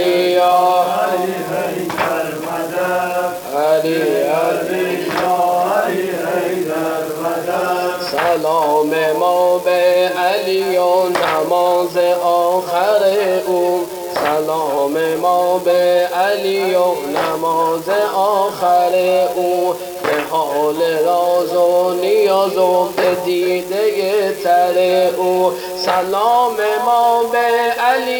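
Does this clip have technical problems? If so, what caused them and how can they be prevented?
Yes. An unreliable data bit flips at random throughout, giving equal-sized spikes heard as a steady crackle that persists through pauses. Prevent it by securing the marginal data connection.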